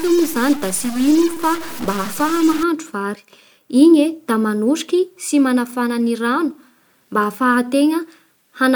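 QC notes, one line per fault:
0.00–2.63 s, stuck bit: harsh, buzzy distortion sits on the speech, and pauses fill with gritty noise instead of silence. Likely one data bit held fixed, offsetting about half the samples by a step of around -25 dBFS that flips with waveform sign.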